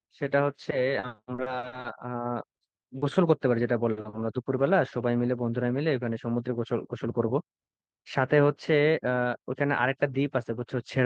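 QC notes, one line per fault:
0.99–4.94 s, repeated packet loss (robotic sound): 15 separate gaps, the longest 50 ms, with about 15% of this stretch patched over. Each hole is filled by extending the preceding sound, so the speech turns choppy, with fragments missing. On a spectrogram, short blocks show frozen, smeared harmonics and abrupt energy dips. The waveform shows brief runs of near-identical repeated cycles broken by small dropouts.
6.12–7.71 s and 8.90–9.53 s, jitter buffer speed-up: the receiver trimmed excess buffered audio by cutting out one or a few pitch periods many times in a row. The first stretch plays about 6% fast and loses roughly a tenth of a second. The second plays about 8% fast and loses about 50 ms. The speech sounds hurried while the pitch stays the same. On the spectrogram, harmonic spacing is unchanged but syllables are squeezed in time. The waveform shows tiny seams where cycles were removed.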